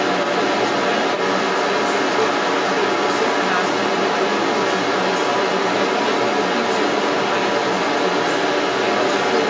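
From the start to the end at 9.5 s, a second voice runs alongside the speech throughout. It sits roughly 5 dB above the talker. This is the other side's voice leaking through, likely because the loudspeaker feeding the microphone was not fully cancelled. Unlike room reverberation, which smears the talker's own speech, this is a separate voice. The call's microphone processing caps everything near 8 kHz, so both voices share that narrowed band.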